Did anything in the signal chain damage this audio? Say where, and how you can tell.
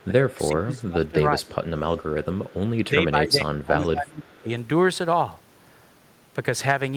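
Yes. The speech ducks by up to about 25 dB at 0 to 1.17 s, 1.37 to 1.47 s and 2.91 to 4.49 s: likely speech suppressed in double talk by call processing.

Faint copies of the voice, about 25 to 30 dB down and 382 ms late, appear at 1.48 to 1.55 s, 2.24 to 2.54 s and 3.84 to 3.89 s. This is likely echo leak past the canceller.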